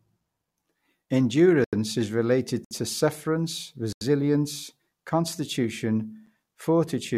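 Blocks of digital silence occur at 1.64–1.73 s, just before "is related to sufferance"; at 2.65–2.71 s, between "is related" and "to sufferance"; at 3.93–4.01 s, after "is related to sufferance"; and at 6.26 s. Each time, the output buffer likely went unfilled and those samples became zeros. The sound drops straight to silence and back with no fade. The 85 ms gaps fit a 4096-sample buffer and are heard as short holes, the 64 ms one as a briefer dropout, and the 8 ms one as a tick.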